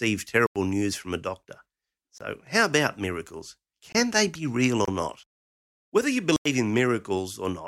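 Five hard dropouts cut the speech to dead silence: a short hole from 0.46 to 0.56 s, brief gaps at 2.18 to 2.21 s, 3.92 to 3.95 s and 4.85 to 4.88 s, and another longer hole from 6.36 to 6.46 s. Each is a block of digital silence, where samples were replaced by zeros with no fade. The two lengths, about 93 ms and 23 ms, fit buffers of 4096 and 1024 samples left unfilled in time.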